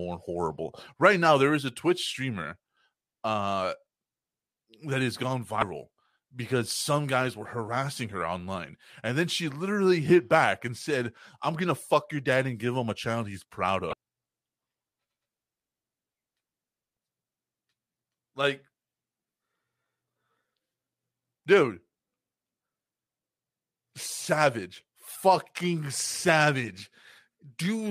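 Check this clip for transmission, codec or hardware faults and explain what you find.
Two short faults break into this speech clip, both from damaged data in a compressed stream. At 5.59 to 5.63 s and again at 13.90 to 13.93 s, a brief glitch of about 30 ms cuts across the speech. Each one is a stretch of corrupted compressed data. The decoder misreads the bad frames, loses its place in the stream and has to hunt for the next valid frame header before normal playback resumes.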